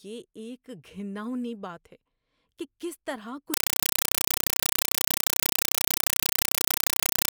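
Compressed stream played as audio takes over at 3.54 s and runs to the end at 7.34 s, replacing the speech. A Dolby Digital (AC-3) bitstream on the digital link was treated as ordinary samples instead of being decoded. Each data frame comes out as a 5.33 ms burst of noise followed by silent padding, repeating 31.25 times a second. The result is a harsh, very loud, chattering static.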